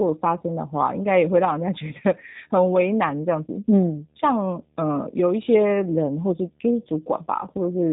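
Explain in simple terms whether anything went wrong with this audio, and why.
The G.729 codec rebuilt this speech from a simple model throughout: nothing above 3.8 kHz remains, and it sounds rough and synthetic rather than merely muffled.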